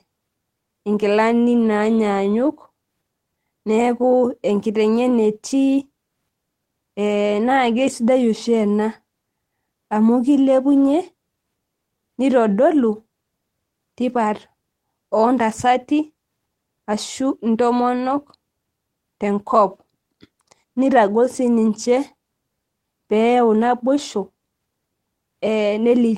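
At 4.93–4.95 s and 23.97–23.99 s, a lost packet was rebuilt from error correction: the next packet's low-bitrate copy filled each 20 ms slot, so there's no gap, just brief roughness and noise.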